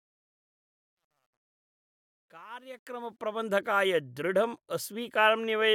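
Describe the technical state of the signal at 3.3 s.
At 3.3 s the fade-in is still under truncation distortion, from 0.0 to 3.45 s: an undithered 11-bit gain stage quantises the rising level coarsely, leaving residual grit before full level.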